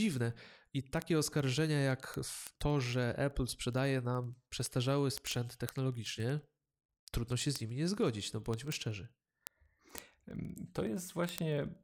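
From 0.13 s to 11.80 s the speech carries word clock ticks: sharp clicks at a steady rate of about twenty per second, some three hundred in all, uneven in strength. The receiving device runs on its own clock, off by a few hundred parts per million, so each slip misreads a sample. What separates this from buffer dropouts is the regular spacing and the absence of any gap, since only one sample goes missing or repeats.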